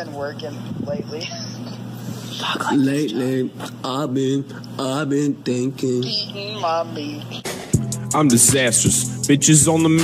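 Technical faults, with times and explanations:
No technical faults, with times or otherwise, are present.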